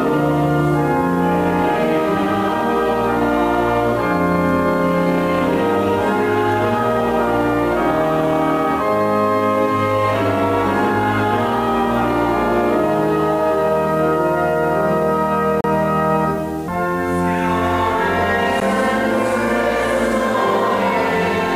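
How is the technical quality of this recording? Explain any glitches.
The recording is held back by one fault that runs through the whole clip. Low bit depth without dither, throughout: the sound is likely rounded to about 6 bits with no dither, so the error tracks the signal and sits only around 30 dB down, leaving quiet passages gritty and the faintest moments sputtering or dropping out.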